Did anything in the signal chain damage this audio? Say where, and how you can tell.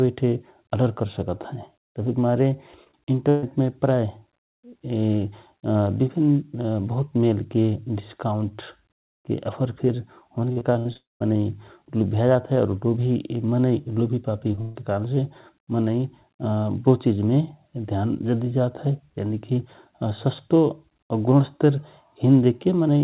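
Yes. Between 2.84 and 3.44 s, and again from 10.52 to 10.97 s, the speech turns choppy and metallic, with pieces missing. This is repeated packet loss (robotic sound) at the network stage. The first stretch has four gaps, the longest 133 ms. The second has five, none longer than 62 ms. Each time the receiver extended the last sound to cover a hole, and the next hole arrived before the audio had settled.

Straight after, from 10.97 to 11.22 s, the sound decays into a fading buzz and then into silence for roughly 180 ms before speech returns. That pattern fits a long network dropout, likely caused by the connection stalling outright. The concealment carried the last sound briefly, gave up, and a quarter-second of audio never played.

At 14.52 and 14.55 s there are two tiny smears or wobbles, each covering about 20 ms of missing audio. This is short concealed packet loss. The decoder bridged each hole from the preceding sound and blended back in, so only a brief wobble is heard.

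From 14.61 to 14.77 s a held buzz or fading hiss replaces the sound, with no silence in between. This is a burst of packet loss of about 140 ms. The receiver stretched the last sound and let it decay, and the speech then resumes further on with the middle missing. Under all of this, the call path's G.711 mu-law coding at 64 kbps leaves nothing above 4 kHz.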